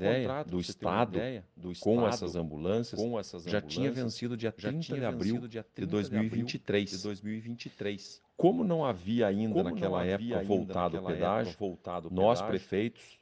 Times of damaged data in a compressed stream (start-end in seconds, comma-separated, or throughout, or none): none